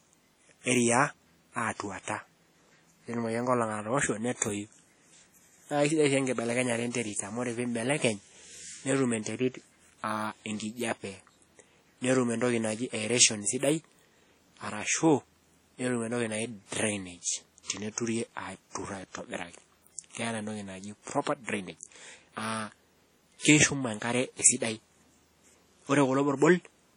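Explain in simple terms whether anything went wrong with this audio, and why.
Yes, throughout the recording the speech sounds smeared and washy, with a hiss that swells and fades along with the talking. That points to likely WMA compression, heavily squeezed. Unlike steady background noise, this hiss follows the speech and rings around it.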